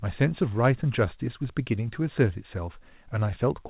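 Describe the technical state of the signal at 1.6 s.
At 1.6 s the speech comes through intact, with no dropout, glitch or distortion, only the narrow band of the call path, with nothing above 4 kHz, which fits G.711 A-law coding.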